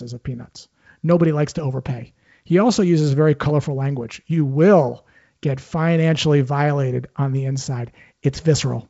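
Nothing faulty is audible in this wideband telephone speech.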